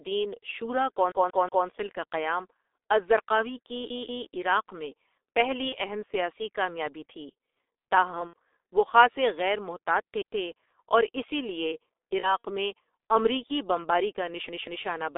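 Throughout, the speech passes through a G.723.1 codec, consistent with a 6.3 kbit/s stream limited to 300 Hz to 3.6 kHz. Heavy coding leaves it muffled, hoarse and smeared. VoIP packet loss concealed by the speech codec follows. At 5.69 to 5.75 s, after "کی عراق میں پہلی", one frame of about 30 ms is lost. At 8.28 to 8.33 s, after "سیاسی کامیابی تھی تاہم", about 60 ms goes. At 12.20 to 12.45 s, after "اور اسی لیے", about 90 ms is lost in scattered gaps. Each time the decoder stretches the last sound into a fading buzzy tone or coloured noise.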